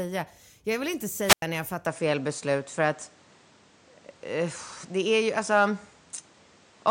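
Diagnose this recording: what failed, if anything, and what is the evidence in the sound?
Wireless microphone squelch dropout at 1.26–1.42 s, in the analogue radio link. The RF signal faded. The receiver's squelch then muted the speech for about 95 ms.

Input switched to a poorer device from 1.86 s onward, likely at the driver stage. Nothing sounds above 9.6 kHz. The level shifts about 5 dB. New background noise appears.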